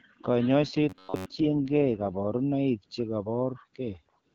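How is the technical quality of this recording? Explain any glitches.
Two glitches stand out in the first half of the clip, both riding on an AMR-WB (HD Voice) call running at 12.65 kbit/s, where the speech carries only light codec roughness.

From 0.60 to 2.14 s there's an AMR rate drop, with the codec stepping down from 12.65 to 6.6 kbit/s. That pattern fits the network trading voice bits for error protection on a weak radio link. Bandwidth stays put and nothing drops out, but the voice gets rougher and more synthetic until the rate recovers.

Inside that stretch, from 0.90 to 1.27 s, the voice turns into a stiff, metallic buzz at about 94 Hz that still roughly tracks the speech. That's robotic sound from repeated short buffers, likely caused by late-arriving audio being covered by replaying a chunk of about 11 ms over and over. Most of the real signal in that window gets skipped, and the repeats stamp that fixed pitch onto it.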